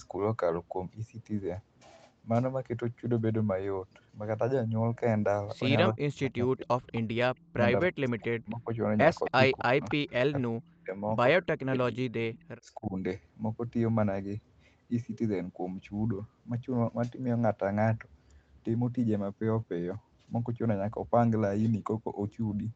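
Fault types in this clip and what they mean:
Speech suppressed in double talk: The echo canceller most likely lost track when both ends spoke at once, could not tell this talker from the returning loudspeaker echo, and clamped down on everything. The speech sinks by as much as about 40 dB, sometimes vanishing in pieces, in four stretches between 5.92 and 12.94 s. The longest runs from 9.29 to 11.98 s, and the last, at 12.61 s, is a shallower dip of about 15 dB.
Echo leak: A far-end loudspeaker's sound likely slipped past that side's echo canceller and was sent back down the line. The result is a faint, delayed copy of the speech trailing about 270 ms behind, roughly 15 to 30 dB below the main level. It appears in short scraps around 6.6, 8.2 and 12.33 s, and most clearly from 9.24 to 10.1 s, overlapping the suppressed passages.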